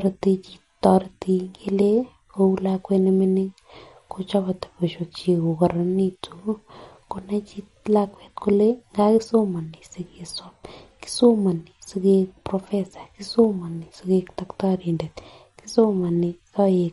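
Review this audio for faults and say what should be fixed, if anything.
MP3 compression runs throughout the clip. The speech has a plainly audible watery, swirling texture, and nothing is heard above 11.2 kHz, so s sounds lose their top and take on a metallic edge. This is likely a lossy encode that ran short of bits: the encoder cut the treble at a fixed point and dropped weaker frequency components, which flicker on and off between frames. The damage points to a low bitrate, around 48 kbps. To prevent it, keep an uncompressed or lossless master and encode only once, at a much higher bitrate.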